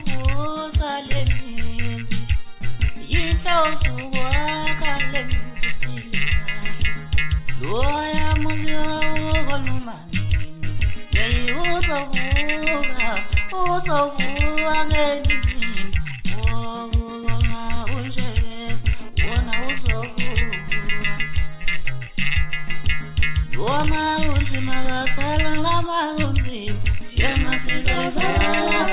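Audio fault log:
1.18 to 1.22 s, short stall from a late packet: a packet was not there when it was due, so the jitter buffer ran empty and the receiver held the last bit of sound for about 18 ms until the packet arrived. It then went on from exactly where it had stopped, so nothing is lost. The effect is a tiny hitch, one sound stretched slightly too long, and from here on playback sits 18 ms later than before.
13.57 to 15.17 s, jitter buffer slow-down: the receiver was building up its reserve of audio. To do this it repeated single pitch periods and small pieces of pauses many times in a row, adding 104 ms over about 1.6 s. Playback runs at 94% speed while the pitch stays the same, so sounds in this stretch are drawn out and slightly sluggish.
17.16 to 17.95 s, jitter buffer speed-up: the buffer held more audio than its target, so the receiver cut short pieces of one or a few pitch periods, many times in a row, to bring the delay back down. 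Around 70 ms is removed in under a second. The audio plays at 108% speed with unchanged pitch, which makes this passage sound slightly hurried and compressed.
19.00 to 20.52 s, GSM phone buzz: a nearby 2G phone in a data transfer sent radio bursts 217 times a second, and the audio circuitry rectified them into a hard, raspy buzz at 217 Hz with many harmonics. The buzz is about 26 dB below the signal and has no relation to it. Because the phone was transferring data, the buzz comes and goes during this stretch rather than staying steady.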